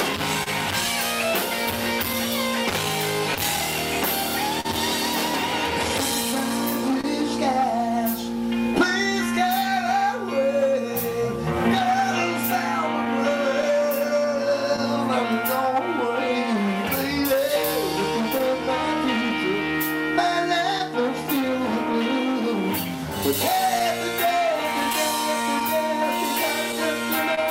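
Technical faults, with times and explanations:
throughout, clock drift between sender and receiver: the sender's clock runs about 1.5% slow, so the receiver's buffer keeps draining and small pieces are repeated. On a waveform this shows as tiny seams and duplicated slivers at uneven intervals.
0.43–4.66 s, scattered short gaps: roughly seven small losses, the longest about 40 ms, each patched by extending the preceding sound. They are heard as brief ticks or smears. A spectrogram shows brief flat, smeared columns where the harmonics stop evolving.
6.91–25.78 s, repeated timing corrections: the receiver stretches the audio to about 99% speed by repeating short pieces, adding roughly 150 ms in total. A waveform shows near-identical repeated cycles at irregular spacing.
7.01–14.80 s, scattered short gaps: about ten concealed losses, none longer than about 30 ms, filled by continuing the last sound. 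They are heard as brief ticks and smears. A spectrogram shows short, frozen, smeared stripes scattered through this stretch.
17.36–21.96 s, scattered short gaps: about five tiny concealed losses, the longest about 15 ms, heard as brief ticks. The waveform shows small seams where the patched sound joins the real signal again.
23.79–27.39 s, scattered short gaps: about five concealed losses, the longest about 30 ms, giving brief smears near the end. A spectrogram shows short horizontal smears where the spectrum holds still for a moment.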